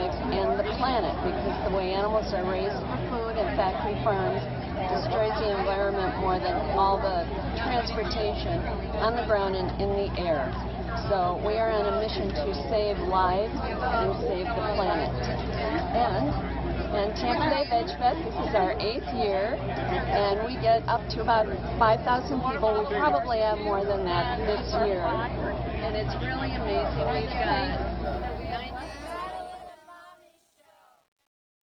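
A fade stage that drops low-order bits without dither causes truncation distortion on the closing fade-out, which begins around 28 s and runs from 28.04 s to 31.72 s. The fade's level falls smoothly, but the waveform collapses into coarse steps, consistent with roughly 10-bit resolution. From 29.19 s to the end the tail turns gritty.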